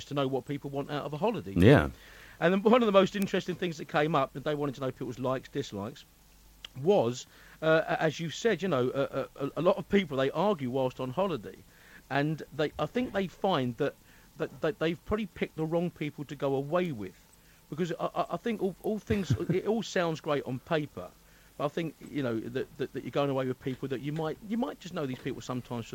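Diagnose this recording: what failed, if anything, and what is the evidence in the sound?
A bit error spike appears twice, at 3.22 s and 16.86 s. Each is a single sample, at about -8 dBFS and about -26 dBFS. A bit flipped in memory or on a digital link. One sample jumped by a power of two and returned, leaving a sharp broadband tick.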